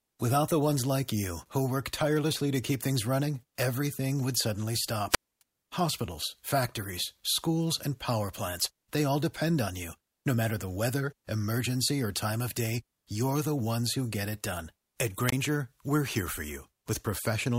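Just after "running everything would suddenly", at 5.09 to 5.42 s, hiss swells and the audio drops to near silence for about 262 ms. At 15.26 to 15.33 s, just before "we're here for", a shorter 24 ms gap follows. Both are wireless microphone squelch dropouts: the FM signal faded until the receiver's squelch muted it.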